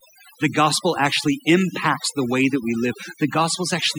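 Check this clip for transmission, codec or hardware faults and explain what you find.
The whole clip shows overdone noise removal. A noise reducer set too hard is pulling individual frequency bands down whenever they sit near its noise estimate, taking quiet parts of the speech too. The gaps go near-silent with twinkly specks.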